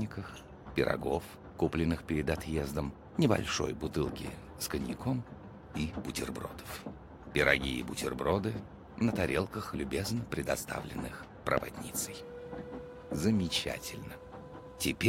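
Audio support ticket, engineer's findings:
Loud pop at 11.58–11.60 s: single pulse, likely a voltage step from a plug, switch, static discharge or driver glitch entering the chain. Sharp pop roughly 20 dB above the signal for about 20 ms; sound continues underneath.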